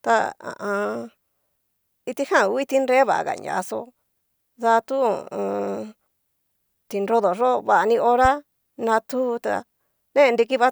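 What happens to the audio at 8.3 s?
A single loud pop lands from 8.25 to 8.28 s, peaking a few dB above the speech, which carries on beneath it. It is likely a brief voltage step, from a switch, plug contact or static discharge, that the downstream circuitry turned into a sharp thump.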